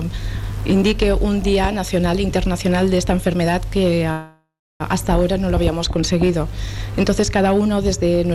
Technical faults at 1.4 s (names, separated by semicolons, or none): none